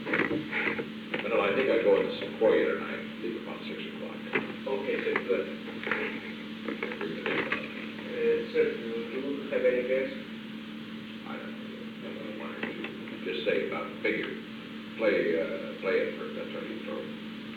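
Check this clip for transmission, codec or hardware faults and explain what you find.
No transmission, codec or hardware fault turns up anywhere in the clip.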